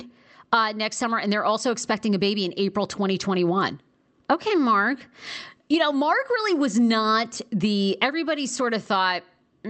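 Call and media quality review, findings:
No faults found in this speech recording. The call path sounds like Opus at a wideband setting, with content stopping at about 8 kHz and coding texture, consistent with the codec working as intended.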